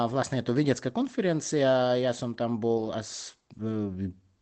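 From 2.73 to 2.87 s, a lost packet rebuilt from error correction sounds rough and noisy. Low-bitrate backup copies filled the loss, so there is no gap.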